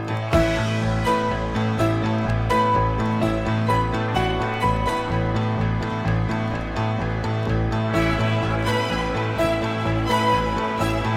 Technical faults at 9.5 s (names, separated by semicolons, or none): loud pop